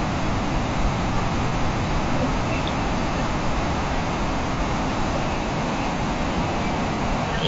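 Throughout the speech, the encoding points to low-delay AAC compression, likely AAC-ELD running at a bitrate around 32 kbps. Its short frames leave little room to resolve the pitch harmonics, and at this rate the bits run thin, so the damage is plainly audible: the voice comes across rough and grainy, with noise filling the gaps between harmonics and a top band that sounds lowered and synthetic rather than natural.

At 1.49 s, 4.55 s and 6.95 s there is AAC frame loss with concealment. Each time a single frame goes missing, about 30 ms of audio, and the decoder patches over it by reusing the last good spectrum with its phases scrambled or its energy interpolated. Because each gap is so brief, nothing drops out to silence; instead each spot is heard as a quick smeared, noisy or phasey blur in the speech.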